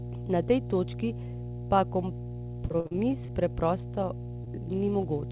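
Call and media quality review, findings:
Mains hum throughout. Steady 60 Hz tone with low harmonics, strong, roughly 10 dB below the speech. Ground loop or nearby transformer coupling the power line into the capture chain.

Repeated packet loss (robotic sound), 2.68–3.30 s. Eight dropouts, longest 48 ms, close to a third of the stretch patched. Jitter buffer concealment extends the last sound repeatedly, giving choppy speech.

Short concealed packet loss, 4.44–4.48 s. Brief smear in the speech. Hole filled by continuing the preceding sound, then blended back. Band stops at 4 kHz, which fits a G.711 narrowband call.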